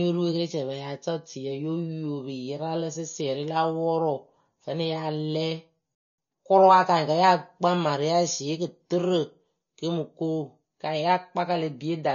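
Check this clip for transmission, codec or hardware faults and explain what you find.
Three faults are present in this speech clip: MP3 compression throughout, then a playback stall followed by time-compressed catch-up just after the six-second mark.

MP3 compression runs through the whole clip, and the damage is plainly audible. The bitrate is low, around 32 kbps. Starved of bits, the encoder drops weak frequency lines that flicker in and out between frames. That is the likely cause of the watery, swirly texture, the metallic edge on s sounds and the softened consonant attacks.

A playback stall occurs from 5.95 to 6.18 s, a gap of about 0.23 s. The speech halts mid-flow and the output falls silent, then resumes. The player most likely ran short of data or had its output thread blocked, so nothing reached the output until it recovered. The break is long enough to register clearly as a dropout.

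Time-compressed catch-up follows from 6.18 to 6.40 s. To clear the backlog the stall built up, the player removes short segments and cross-fades across the joins, playing the material at twice normal speed. Pitch stays at its normal level, but for those 0.22 s the speech sounds rushed.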